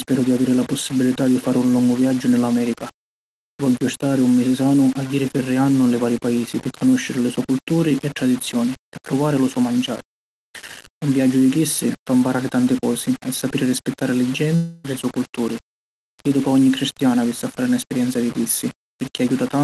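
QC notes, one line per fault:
throughout: low bit depth without dither, grainy distortion that follows the speech, with noise around 20 dB below it; likely from coarse rounding, which fits a 4-bit signal.
14.55–14.85 s: long network dropout. About 0.29 s of speech is lost, likely in transit, and is replaced by a fading buzz that continues the last sound before speech resumes.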